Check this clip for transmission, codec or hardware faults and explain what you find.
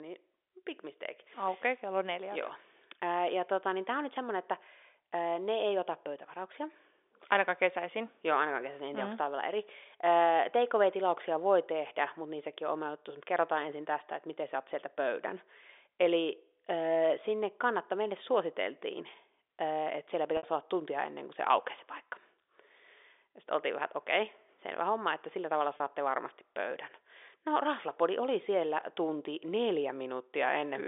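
Two short dropouts show packet loss with pitch repetition, heard over telephone-band audio running from 300 Hz to 3.6 kHz. The first runs from 20.37 to 20.43 s, about 60 ms lost. The second runs from 25.77 to 25.80 s, about 30 ms lost. The receiver bridges each gap by repeating the last pitch period. The second gap is short, so it sounds like a briefly held, buzzy tone before the sound resumes; the first outlasts the fade and dies into silence before the speech returns with a short cross-fade. The shorter gap points to one lost packet, the longer to two.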